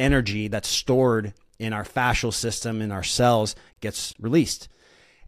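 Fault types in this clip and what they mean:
No faults detected in this speech recording.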